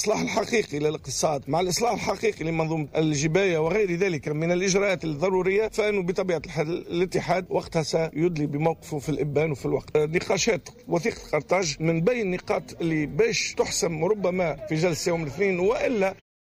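No technical faults can be heard, and the smooth fade-out that begins around 16 s and ends at 16.22 s is an ordinary edit.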